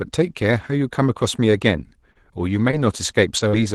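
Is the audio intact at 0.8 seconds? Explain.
Yes, the speech at 0.8 seconds is intact, with no dropout, click or other fault at that moment.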